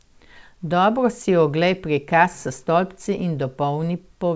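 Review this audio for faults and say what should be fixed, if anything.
Nothing needs fixing: the speech has come through the WebRTC call path with content stopping at 8 kHz, as expected for a wideband call codec, and no faults are audible.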